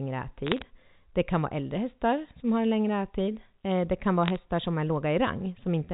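Sharp ticks crackle over the speech from 0.47 to 0.62 s and again from 4.26 to 4.36 s: bit errors on a digital phone line. Flipped bits on the G.711 line, at roughly 0.3 and then 0.15 percent, each corrupt single samples.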